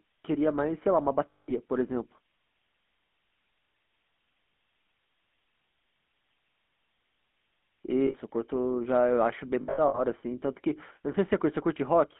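Throughout, the GSM full-rate codec, consistent with 13 kbps, models the vocal tract and drives it with a thinned, regularly spaced pulse excitation on a line passing only about 200 Hz to 3.5 kHz. The speech comes out plainly buzzy and gravelly.

Lost GSM frames occur from 1.31 to 1.53 s, where 180 ms goes missing. The decoder keeps reusing the last good frame's settings, so the sound holds as a rough, metallic ring. An 80 ms loss at 8.06 to 8.15 s does the same. From 9.62 to 10.00 s, 220 ms of losses are scattered, the longest run around 70 ms, leaving broken patches of ringing.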